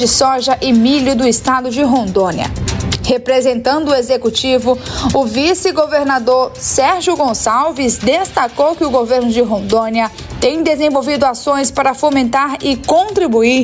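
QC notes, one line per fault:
throughout, gain pumping: input gain is likely set far too high, so a fast limiter clamps down on every loud sound, swinging the level by around 15 dB and leaving the sound squashed.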